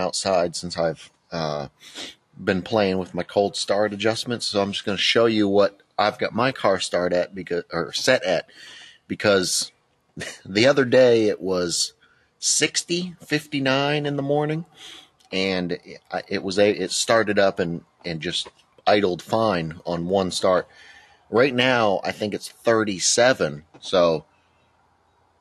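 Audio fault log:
8.43–8.58 s, 11.92–12.27 s, 15.05–15.32 s, 17.81–18.05 s, 18.5–18.86 s, 21.01–21.31 s, 23.62–23.82 s and 24.22 s to the end: sound cut by the noise suppressor. The suppressor mistook stretches of the sound for noise and pulled them down by about 11 to 12 dB, so the level briefly sags or a decay ends early. The last dip runs for roughly a second. On a spectrogram these stretches show as darker bands, and on the waveform the envelope narrows.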